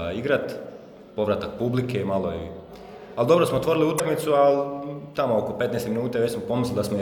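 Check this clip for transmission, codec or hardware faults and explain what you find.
One fault turns up: damaged data in a compressed stream, from 3.96 to 4.00 s. Corrupted bytes there made the decoder misread frames and resynchronise, producing a brief glitch. On a spectrogram it shows as a sharp, brief disruption; the waveform shows an abrupt discontinuity.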